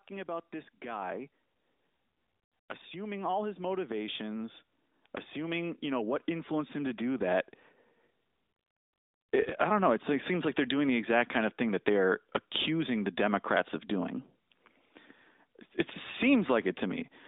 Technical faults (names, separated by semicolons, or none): automatic gain rising; AMR bit errors